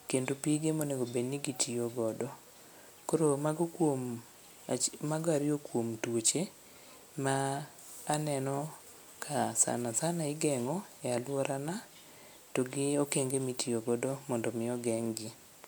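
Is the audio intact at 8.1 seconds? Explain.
Yes, the speech at 8.1 seconds is intact, with no fault in the audio at that moment.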